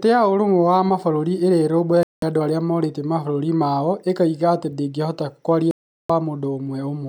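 At 2.03 s the speech mutes abruptly until 2.23 s, and again from 5.71 to 6.10 s: digital broadcast dropouts, where the receiver stopped getting valid frames and switched to silence. The holes last about 0.19 and 0.38 s, which fits whole frames of roughly 32 ms being discarded. Unlike analogue fading or hiss, the gaps are clean digital silence, with no concealment, smearing or repeated fragments, and the programme resumes further along.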